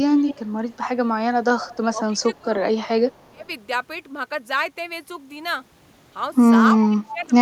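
From 0.17 to 0.53 s a delayed copy of the speech trails the original by about 312 ms. This is an echo leak, likely from a far end on loudspeaker whose echo canceller let part of the returned signal through. It recurs at 0.70–0.77, 1.59–1.77, 3.12–3.29 and 6.78–6.88 s, ranging from fairly audible, about 10 dB under the speech, to barely there, about 40 dB down. It differs from reverberation because the copy is a discrete repeat at a fixed lag, not a smooth decay.

From 1.90 to 2.64 s the talker's level dips by up to about 10 dB while the other side is also speaking. This is speech suppressed in double talk, likely an echo canceller mistaking the overlap for echo and attenuating everything. The same happens at 3.29–3.48 s, dropping as much as about 25 dB, and at 6.88–7.36 s, about 20 dB down. Here sound is taken away from the main talker, where the echo leak adds an extra, delayed copy.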